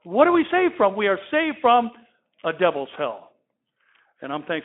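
No technical faults can be heard in this speech recording.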